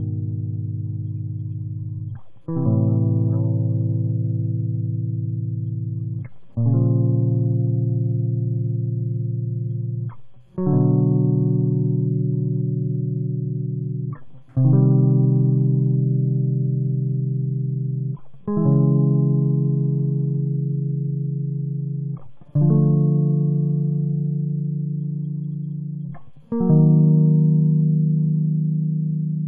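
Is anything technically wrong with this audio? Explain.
No, the music signal shows no technical faults anywhere in the clip.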